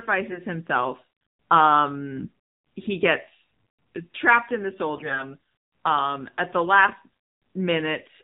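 The speech runs through the AMR narrowband mobile codec from start to end. Nothing above 4 kHz survives. The voice sounds buzzy and synthetic, with plainly audible codec damage. That fits a low AMR-NB rate near 7.4 kbps, where few pulses drive the vocal tract model.

AMR bit errors strike three times: 0.30 to 0.39 s, 2.17 to 2.28 s just before "he gets trapped in", and 4.96 to 5.25 s just after "trapped in the soul". A few percent of the weakly protected bits arrived flipped. Misplaced pulses and wrong fine values make the voice hoarse, scratchy and gargly. The last burst is the longest and the harshest.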